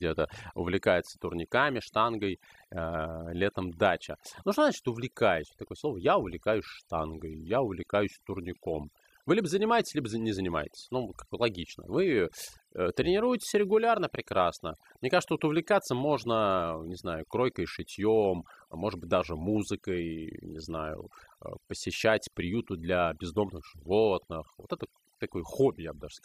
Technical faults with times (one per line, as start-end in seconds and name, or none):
0.00-26.25 overdone noise removal